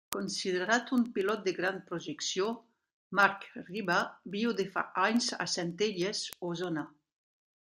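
Speech, with word clock ticks from 0.13 s to 7.57 s. Ticks recur about every 70 ms, roughly a hundred in all. The receiver runs on its own clock, around 300 ppm off the sender's. At each slip one sample is dropped or repeated.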